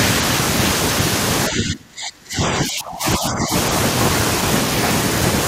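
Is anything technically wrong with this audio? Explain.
Yes. Speech suppressed in double talk from 1.49 to 3.53 s: the speech drops sharply for about two seconds, falling by roughly 30 dB at its deepest. The likely cause is an echo canceller that, with both sides talking, couldn't separate this talker from loudspeaker echo and attenuated everything.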